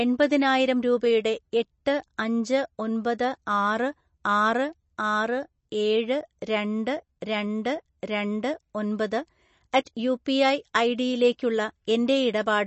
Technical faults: MP3 compression

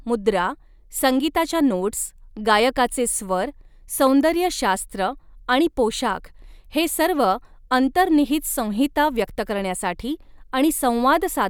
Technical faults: none

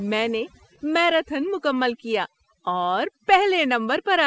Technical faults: overdone noise removal

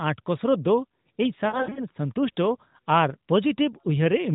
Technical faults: lost AMR speech frames

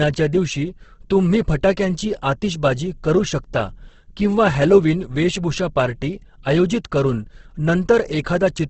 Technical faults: Opus compression

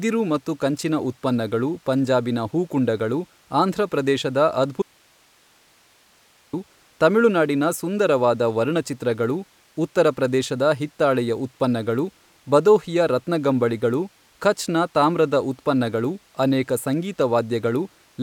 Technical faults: audio dropout to a faint residue

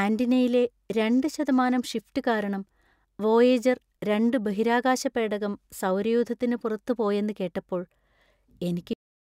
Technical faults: cut-off end

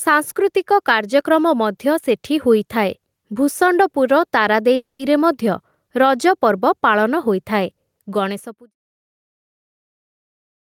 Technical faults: gain pumping

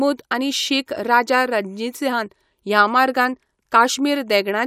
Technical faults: none

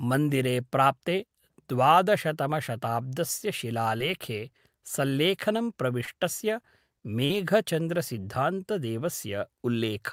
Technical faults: short concealed packet loss

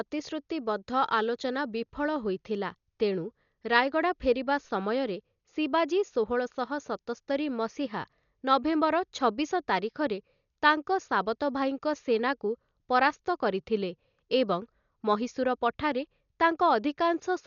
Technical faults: Dolby Digital compression

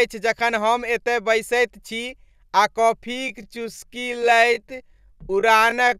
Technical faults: time-stretched section

